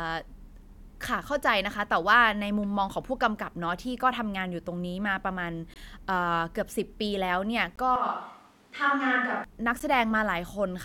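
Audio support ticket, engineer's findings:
Gap between stream segments, three instances: hard-edged silent holes at 5.74–5.76 s (about 21.5 ms), 7.76–7.78 s (about 18.3 ms) and 9.80 s (about 12.1 ms). Spacing of roughly 2 s matches the segment length. Component: segmenter or packager timestamps. Mechanism: consecutive segments leave a small timeline gap and the player pads it with silence. Nothing is dropped, but each hole adds a little time.

Switch to a distant microphone, 7.96–9.44 s: sudden change to a roomy, hollow, thinner sound, a few dB quieter, with room noise rising to about 35 dB below the speech, then an abrupt return. Component: likely the close mic dropping out and a camera or room mic covering the span.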